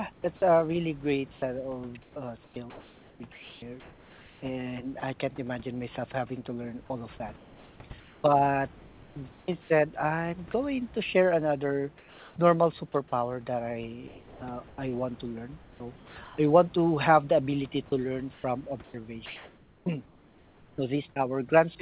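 A speech recording over a narrowband call path with nothing above 4 kHz, which fits G.711-style telephone coding, and room noise about 29 dB below the speech. The sender's discontinuous transmission likely cut off the real background at 0.12–0.24 s and 11.98–12.36 s, leaving the receiver to generate comfort noise in place of the background. Those pauses turn flat and featureless, about 7 dB and about 3 dB quieter respectively. Over 2.02–10.54 s, 14.08–16.38 s and 17.88–21.16 s, the sender's voice detector likely toggled repeatedly, so the sound is chopped by the voice detector. About 3.1 s, 0.96 s and 1.6 s of quiet syllables and word edges were swapped for synthetic fill, making the speech choppy.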